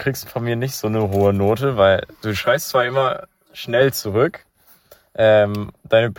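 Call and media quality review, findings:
Channel delay (comb filtering), 2.42 to 3.81 s. One channel lags the other by roughly 5 ms before the mono sum. Common speech content cancels at evenly spaced frequencies: first notch near 100 Hz, then about every 200 Hz. Speech turns hollow and phasey, then returns to normal after 3.81 s. Probable component: stereo-to-mono downmix or per-channel buffering.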